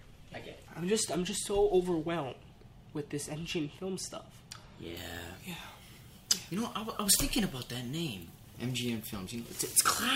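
From 4.97 s to the end, pre-emphasis is left on: a 75 µs FM-style treble boost without its matching de-emphasis, lifting 10 kHz by about 13 dB over 1 kHz. It sounds thin, bright and hissy, unlike bass loss, because the lows stay intact.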